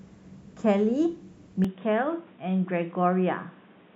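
At 1.65 s the speech turns dull and boxy, with nothing above 3.8 kHz, a drop of about 5 dB and new background noise. The input likely switched to a poorer device.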